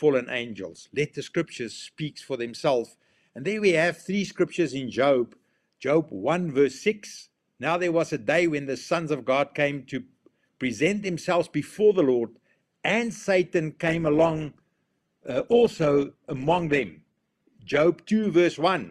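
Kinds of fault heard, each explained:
Adaptive stream at a lower bitrate: the player hit a slowdown in the connection and switched to a leaner encoding of the same stream, then switched back once conditions recovered. From 13.87 s to 17.87 s the sound abruptly takes on a grainy, smeared codec texture, with no gap at either switch. The degradation fits a step from roughly 64 kbit/s Opus down to about 16 kbit/s.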